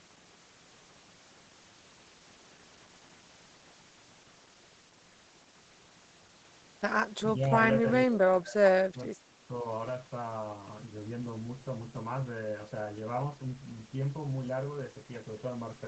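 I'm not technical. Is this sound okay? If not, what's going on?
No. Between 8.07 and 9.43 s the voice turns much quieter in patches, likely speech suppressed in double talk, with the call ducking the voice, not dropping out like a network glitch.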